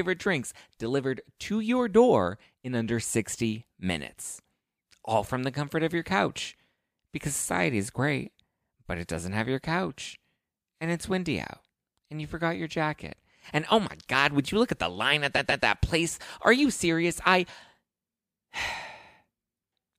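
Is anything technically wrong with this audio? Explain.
Yes. There are repeated frames from 15.35 to 15.63 s, after "at the line at" and before "that place". A 139.3 ms block of compressed data plays twice more, which fits a run of three frames. This causes an audible stutter and adds 278.6 ms.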